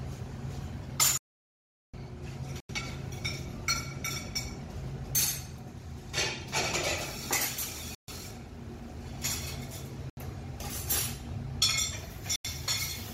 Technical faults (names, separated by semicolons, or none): audio dropout to silence; Bluetooth stall